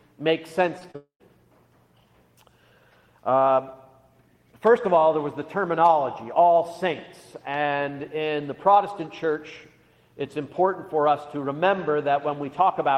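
Brief smears at 0.79–0.83 s and 0.91–0.96 s are short concealed packet loss: audio arrived late, and the decoder bridged each gap by extending the preceding sound. From 0.96 s to 1.28 s, a fading buzz or hiss of about a quarter second gives way to a tenth of a second of silence, and the audio resumes slightly ahead, most likely a long network dropout in which nothing arrived and the receiver stretched the last sound until it ran out.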